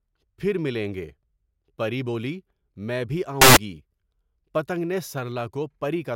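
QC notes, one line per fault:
3.41–3.57 s, samples built from the wrong bytes: for about 0.15 s the speech is replaced by a burst of loud, harsh broadband noise that stops as abruptly as it starts. During this stretch the bytes of each sample were assembled incorrectly, whether offset by a byte, swapped in order or read with the wrong alignment, so the rapidly fluctuating low-order bits ended up as the most significant part of every value. Those near-random bits dominate, turning the signal into broadband hiss at high level.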